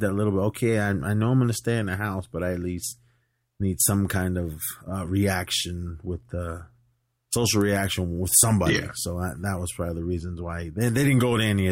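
No technical faults turn up anywhere in the speech, so there is nothing to describe in time order.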